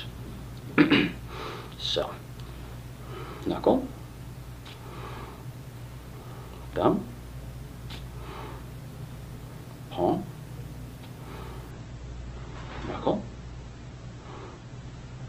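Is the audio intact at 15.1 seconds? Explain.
No. At 15.1 seconds the sound is dull, with nothing above about 8.1 kHz and more smearing and warbling codec artefacts. This is an adaptive stream at a lower bitrate, running from 11.71 s to the end at 15.29 s. When the connection slowed, the player switched without a gap to a much leaner encoding, which fits a drop from about 64 kbit/s to about 12 kbit/s Opus, and it discards treble to save data.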